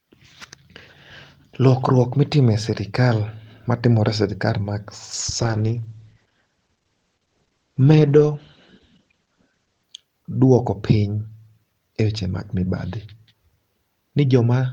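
At 5.14 s, just after "sirikal matimore e sirikal", a call bitrate drop sets in and lasts until 9.91 s, ending around "duoko piny". The bandwidth estimate fell and the encoder switched to much coarser coding, which fits a drop from about 32 kbps to 11 kbps. The speech turns muffled and rough. On a spectrogram, energy above 8 kHz vanishes abruptly for those 4.8 s, leaving a flat ceiling before full bandwidth returns.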